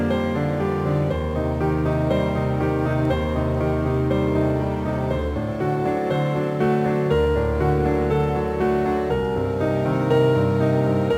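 Right from the start and all the way through, there's crude rate conversion: samples were just repeated to stretch to a new rate, no filtering, which fits a 44.1 kHz to 48 kHz jump. That leaves a gritty, inharmonic fizz roughly 35 dB under the sound, riding loud and bright moments.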